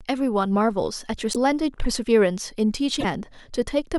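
Speech, with two brief glitches where the audio skips forward and breaks into a short chirp, noise burst or hole, at 1.32 to 1.36 s and 2.99 to 3.05 s. The likely cause is a broken MP3 bit reservoir: after dropped frames of about 26 ms, the following frames fetch borrowed bits from the wrong data.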